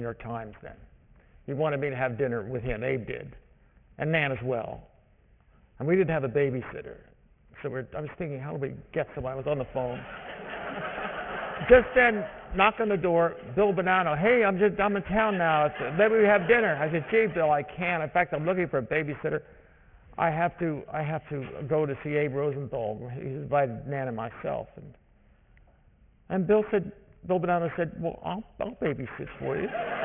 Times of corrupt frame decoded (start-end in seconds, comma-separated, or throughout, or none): none